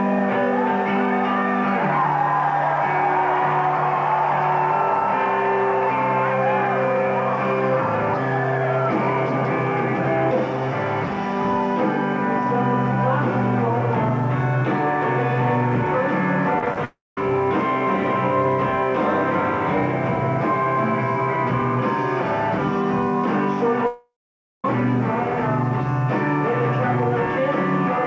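The audio comes through a call-style path with nothing above 8 kHz, which fits a wideband codec like G.722 at around 64 kbps. Starting at 16.59 s and running to 16.78 s, there's a burst of repeated packet loss with that robotic sound. Six short holes, none longer than 18 ms, get patched by stretching the previous bit of audio. About 60 ms ends up filled in, roughly 31% of that stretch, so it comes out choppy. Right behind it, from 16.85 to 17.18 s, there's a gap that sounds like a long network dropout, which is the likely cause. About 320 ms never plays: the last sound smears on briefly as a fading buzz, then roughly 210 ms of silence, and the audio picks back up further along. The same thing happens again, longer, from 23.87 to 24.65 s. About 770 ms goes missing, a short concealed tail fades out, and around 540 ms of dead air follows before the audio returns with that chunk gone.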